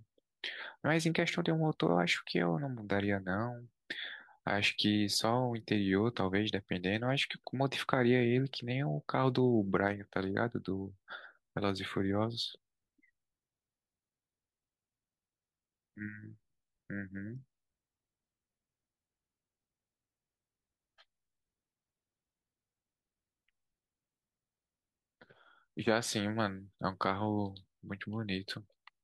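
Speech recording with no audible technical faults anywhere.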